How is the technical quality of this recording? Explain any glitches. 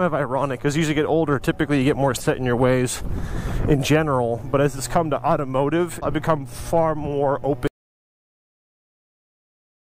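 There's one real problem here: an audio dropout to silence that starts at about 7.67 s and runs all the way to the end of the file. The sound just stops mid-flow and what follows is dead digital silence, not even a trace of room tone. That pattern most likely means the input went missing, say a device disconnecting or a link failing, while the recorder kept writing silence, so whatever happened after that point is simply lost.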